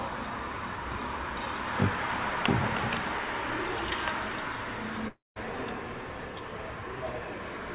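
From 5.08 to 5.38 s the sound is replaced by a fading buzz, then 190 ms of silence; likely a long network dropout losing 280 ms of audio.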